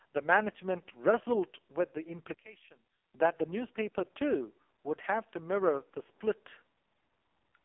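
Throughout, the speech sounds buzzy, thin and synthetic, as if squeezed through an old phone line, with nothing above 3.4 kHz and little below 200 Hz. This is heavy AMR narrowband mobile codec damage, consistent with AMR-NB's lowest mode of 4.75 kbps, where a few pulses per subframe drive a crude vocal-tract model.

From 2.34 to 3.14 s the voice suddenly drops by about 17 dB and turns faint. The likely cause is one channel inverted: with one stereo side's polarity flipped, the centred voice cancels when the channels are summed to mono.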